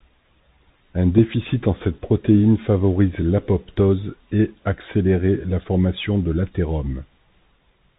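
From start to finish the speech sounds thin and boxed in, with nothing above about 4 kHz, a granular hiss beneath it, scratchy s sounds, and distortion on loud, bright passages. This is the Bluetooth CVSD headset codec, which fits a 64 kbps link. It sends one bit per sample, saying only whether the signal rises or falls, while the step size adapts. Fast high-frequency swings outrun that step, producing the grit, and the damage is plainly audible throughout.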